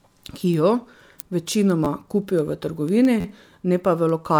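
At 1.85 s there's a repeated buffer in the speech: new audio didn't arrive in time, so the same tiny slice, about 12 ms long (which fits a 512-sample buffer), plays back-to-back with hard joins, giving a quick buzzy stutter. It happens again at 3.20 s, this time stretching to nearly 50 ms with more repeats, so the buzz is longer. Nothing seems to get dropped; the sound just stalls briefly.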